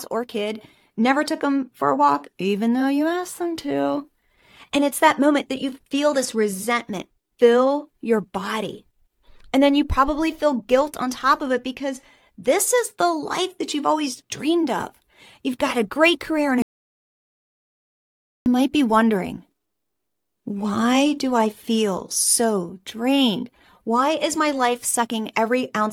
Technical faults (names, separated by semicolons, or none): audio dropout to silence